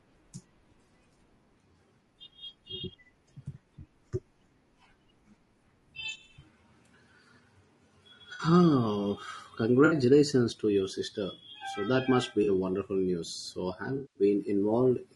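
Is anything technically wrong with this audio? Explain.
Yes, there are two faults.

Throughout the clip, the speech sounds rough and grainy, with noise filling the gaps between the pitch harmonics and a thin, somewhat synthetic top band. This is low-delay AAC compression, likely AAC-ELD at a low bitrate, with the damage plainly audible at around 32 kbps. Its very short frames cannot separate closely spaced harmonics well, so they spend more bits than usual, and at this rate too few remain to encode the voice cleanly.

Four brief patches sound smeared, noisy or phasey. They fall at 8.33 to 8.43 s, 9.85 to 9.95 s, 12.43 to 12.48 s (between "that must be" and "a wonderful news") and 13.95 to 14.23 s. This is AAC frame loss with concealment. Blocks of coded audio went missing, about 60 ms, 60 ms, 40 ms and 200 ms respectively. The decoder then rebuilt the gaps from the last good spectrum, so the replacement sound is plausible but blurred. 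The final, longest gap fits about ten lost frames.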